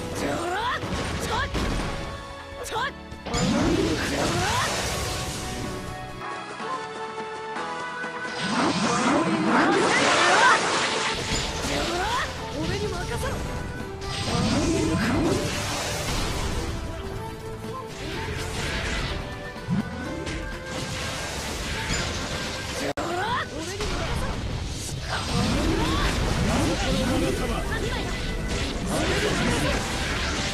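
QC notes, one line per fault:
6.21–11.14 s, input switched to a poorer device. The top end suddenly stops near 10.5 kHz, and a faint new noise floor appears, roughly 40 dB under the signal. There is no gap and no level jump. A likely change to a narrower-band microphone explains this.
15.37–19.31 s, call bitrate drop. The sound turns coarse and watery as the encoder starves for bits. It is roughest for about 1.87 s, then recovers. The change in quality points to a fall from 64 kbps to around 13 kbps.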